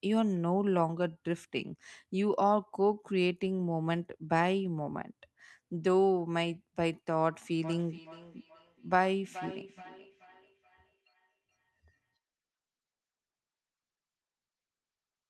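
Feedback echo between two devices runs from 7.64 to 12.19 s. Two devices in the same room are on the call, and one plays back what the other's microphone captured. That microphone hears the playback and sends it round again, and neither echo canceller removes the other device's output. The speech returns at a fixed interval of roughly 0.4 s, peaking at about 17 dB below the speech and growing thinner and more ringing with each pass.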